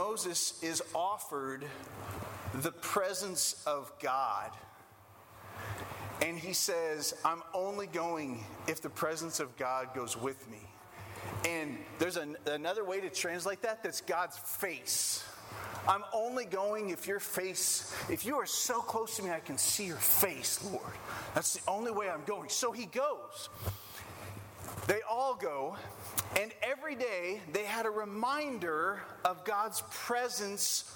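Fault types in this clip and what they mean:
Bit error spike: a flipped bit knocked one sample off by a power of two, giving lone broadband ticks at 10.42 s and 19.74 s.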